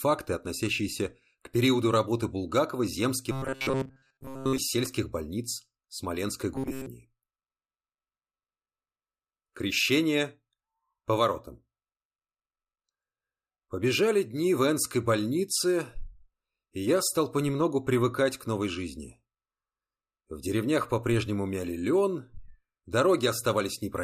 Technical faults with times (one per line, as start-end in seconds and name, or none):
3.32-4.58 robotic sound from repeated short buffers
6.55-6.86 robotic sound from repeated short buffers